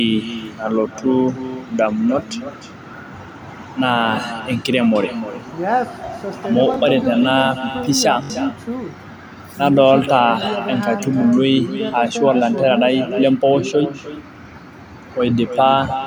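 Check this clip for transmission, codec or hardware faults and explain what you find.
Two problems show up: an uncancelled echo across the whole speech clip, and a couple of repeated-buffer stutters.

Echo with no canceller runs the entire time. The far end's speaker is feeding back into its microphone with nothing removing it, so every phrase returns roughly 300 ms later, about 12 dB down, as a thinner shadow trailing the talker.

The repeated buffer shows up at 6.74 to 6.76 s and 8.24 to 8.30 s. New audio arrived late, so the device replayed its last chunk of about 21 ms, which fits a 1024-sample buffer. The first plays once extra, losing about 20 ms. The second repeats three extra times, losing roughly 70 ms.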